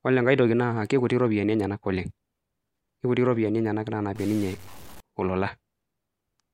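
From 4.16 to 5.00 s the speech turns harsh and buzzy, and its quiet moments fill with gritty noise. The likely cause is a stuck bit: one data bit held fixed, so about half the samples jump by a step of roughly -40 dBFS, following the waveform.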